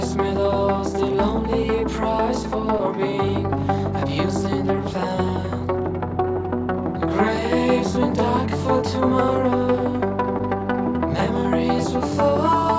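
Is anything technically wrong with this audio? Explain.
Yes, there are two short concealed packet losses, at 2.78–2.81 s and 10.38–10.41 s, each replacing about 20 ms of sound. The receiver extended the preceding audio into each gap and then cross-faded back into the real signal, which is heard as a brief smear or wobble. On a waveform, the repeated cycles look too regular for their position. On a spectrogram, a narrow vertical seam appears, under the flat 8 kHz ceiling left by the G.722 call path.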